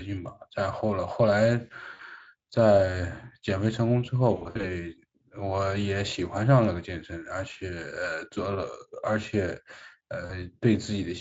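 Speech packets dropped out of the VoIP stream, and the Speex decoder, whose coding damage is light, covered each gap with VoIP packet loss concealment. It extrapolated the last pitch and spectral shape with falling gain. At 1.93 s about 60 ms is replaced by a short, stretched sound that fades. From 4.35 to 4.69 s losses scattered over roughly 280 ms leave repeated fading patches. A brief blip follows at 7.53 s, then a weakened 40 ms stretch at 10.25 s.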